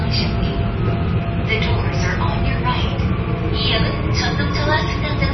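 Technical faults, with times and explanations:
Throughout, MP3 compression: nothing is heard above a hard ceiling at 5.9 kHz, and the remaining content is heavily damaged, with a watery, swirling texture and smeared attacks. The likely cause is a low-bitrate MP3 encode, consistent with roughly 24 kbps, where the encoder drops the treble and zeroes weak frequency lines that flicker between frames. A simple low-pass filter would remove the treble cleanly and leave no swirl.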